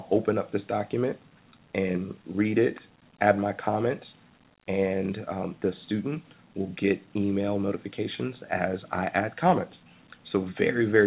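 Nothing stood out on listening, apart from the narrow top end of a telephone-grade call path, with no content above about 4 kHz.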